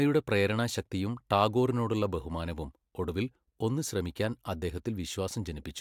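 No technical faults can be heard anywhere in this recording.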